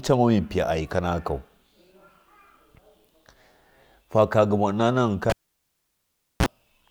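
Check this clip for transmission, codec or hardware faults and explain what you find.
A hardware fault: the cable was pulled and plugged in between 5.30 and 6.46 s. With the live lead out for 1.11 s, speech pops to near silence. A 34 ms burst of 60 Hz mains buzz marks the tip touching, then a second pop restores sound.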